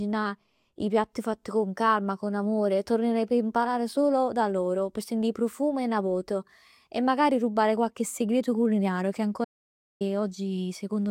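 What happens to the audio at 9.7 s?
At 9.7 s the speech is in the middle of an audio dropout to silence, running from 9.45 to 10.01 s, right after "rubare qualche segreto culinario". For about 0.56 s the sound cuts off completely, with no room tone, then resumes abruptly. The likely cause is a brief loss of input while the recording continued writing zeros. On a waveform it shows as a flat, near-silent stretch, and on a spectrogram as a blank vertical band with hard edges.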